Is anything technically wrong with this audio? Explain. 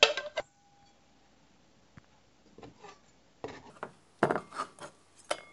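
Yes, three separate timing faults affect these everyday sounds, which come through a band-limited call path with nothing above 8 kHz, consistent with a G.722 codec.

Skip ahead, between 0.40 and 0.42 s: a stretch of audio was discarded while later packets were already waiting, so playback leaps forward by roughly a second and the two sides are butted together with no silence or fill. A dropout would leave a gap or a concealment smear, and a speed change would stretch time. Here the sound simply jumps, and the abrupt join is the only trace.

Jitter buffer speed-up, from 0.49 to 3.03 s: the receiver had built up more delay than it wanted, so it trimmed many tiny slices of a pitch period or so, shaving off about a third of a second in total. The sounds run at 112 percent speed yet keep their natural pitch, which distinguishes this from a wrong-speed section. The result is a hurried pace rather than any audible jump.

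Section at the wrong speed, from 3.70 s to the end: the audio plays 1.45 times too fast, with pitch rising together with tempo by about seven semitones. The likely cause is playback or editing against the wrong clock. Because speed and pitch shift together, everything turns higher and squeakier. The buffer speed-up, by contrast, left pitch untouched.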